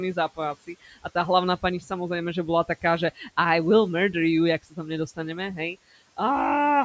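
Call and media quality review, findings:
Speech cut by the noise suppressor, four events: 0.67–1.05 s, 1.81–1.91 s, 3.15–3.27 s, 4.63–4.78 s. Soft segments are turned down about 11–15 dB, a tenth of a second or so each, and sound swallowed. The suppressor gate mistakes low-level speech for noise. Unlike a packet-loss dropout, sound is attenuated rather than silenced, with no click or gap. The room noise is about 24 dB below speech.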